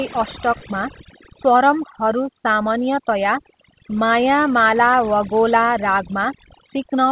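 From the start and through the whole clip, overdone noise removal is audible. The suppressor was set too aggressively, so frequency bands near its noise estimate are pushed down or switched off. The background drops and breaks up into twinkling specks, and quieter parts of the speech go with it, all within a band that stops around 4 kHz, which fits a narrowband call codec.

At 0.58 to 0.63 s there is a short concealed packet loss. About 20 ms of audio failed to arrive, and the receiver covered it with 32 ms of extrapolated sound, continuing the preceding signal before crossfading back into real audio. It is heard as a brief smear or wobble.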